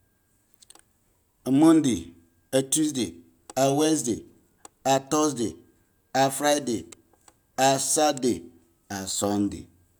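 No dropouts, clicks, distortion or level jumps are audible at any point in the speech.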